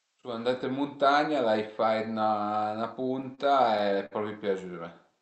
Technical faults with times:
3.35-3.40 short stall from a late packet
4.06-4.13 short stall from a late packet

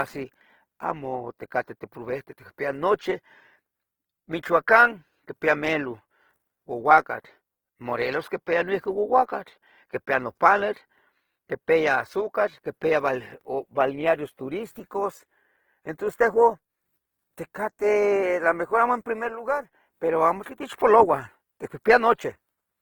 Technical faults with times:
0.00-22.81 Opus compression

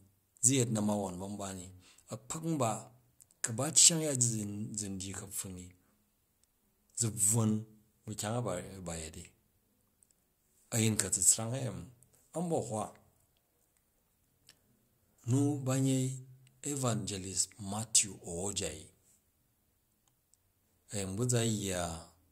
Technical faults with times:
none

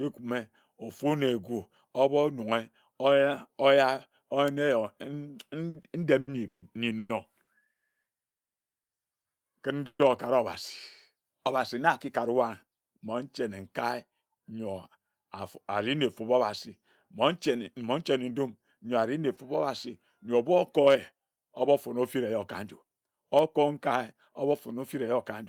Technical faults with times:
5.69-7.49 repeated stalls (stutter)
7.73-8.90 call audio freeze
9.86-10.01 call audio freeze
12.31-15.06 jitter buffer speed-up
19.35-19.39 short concealed packet loss
20.41-25.43 jitter buffer speed-up

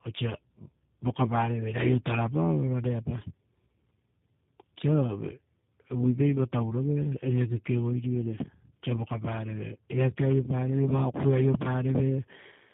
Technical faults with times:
0.00-12.74 tandem speech coding

